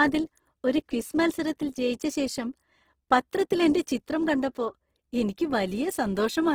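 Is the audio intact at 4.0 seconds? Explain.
No. At 4.0 seconds, as throughout the clip, the speech carries plainly audible Opus compression damage, most likely from a low-bitrate encode. The encoder keeps each band's energy but, short of bits, fills detail with noise or folded copies of lower bands, so the sound turns rough and grainy rather than hollow. That graininess, with few holes and little of MP3's swirling, sounds like the music mode at a rate near 16 kbps.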